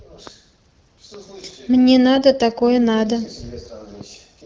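A short burst of hoarse, scratchy, gargly roughness breaks into the speech from 2.16 to 2.20 s, with pitch and level roughly held. These are AMR bit errors: a few percent of the weakly protected bits in the AMR-WB (HD Voice) stream, running at 12.65 kbit/s with light codec colouring, were flipped while the checksum on the critical bits still passed. That misplaced excitation pulses and skewed the fine pitch, gain and spectral values, over a span that fits two frames.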